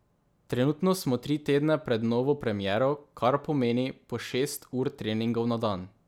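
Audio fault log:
No faults are audible in this speech clip.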